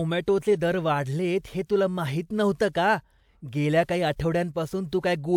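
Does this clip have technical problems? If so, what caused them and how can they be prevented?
No, this clip has no technical problems, so there is nothing that needs preventing.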